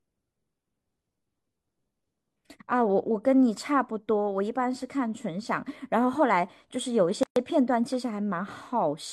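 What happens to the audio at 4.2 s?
Nothing goes wrong at 4.2 s; the speech carries on intact through that point, with no dropout, click or distortion.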